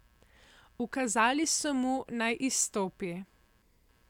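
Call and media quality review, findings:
Computer activity noise, throughout speech. Faint buzz, pulses around 100 per second, roughly 40 dB below speech. Processor/GPU/mouse load currents modulating shared audio ground. Spectrogram: faint comb of harmonics near 100 Hz spacing, persisting through pauses, uncorrelated with speech.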